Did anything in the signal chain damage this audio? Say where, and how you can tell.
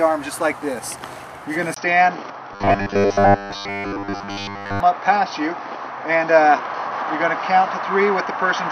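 Yes. At 1.74 s there is a 20 ms gap. After it the sound turns narrower and duller through to the end, with new background noise about 45 dB down. Level barely moves. This is likely an input switched to a poorer device.

From 2.53 to 4.80 s the sound turns to a rigid, metallic buzz at 100 Hz. That fits a 10 ms buffer repeated while most of the real audio is skipped. The cause is likely robotic sound from repeated short buffers at the driver or buffer stage.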